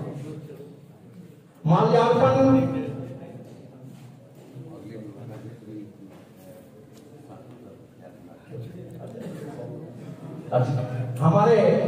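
Nothing goes wrong anywhere in this one; there's no glitch, dropout or distortion to point to at any moment, so there's nothing to flag.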